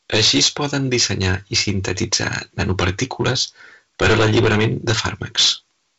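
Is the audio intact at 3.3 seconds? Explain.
No. At 3.3 seconds, as throughout the clip, the speech is hard clipped. The signal is driven about 19 dB beyond what a stage in the chain can pass, so every peak is sliced flat, with roughly one sample in twenty pinned at the limit. Those squared-off tops generate harmonics well up the spectrum, heard here as a harsh fuzz on each loud syllable, reaching up to the G.722 band edge near 7.8 kHz.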